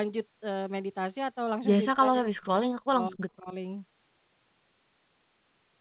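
From 1.9 to 2.6 s and again from 2.82 to 3.54 s, the speech drops out hard, roughly 40 dB then 35 dB down. That's speech suppressed in double talk, likely an echo canceller mistaking the talker for loudspeaker echo while both sides spoke.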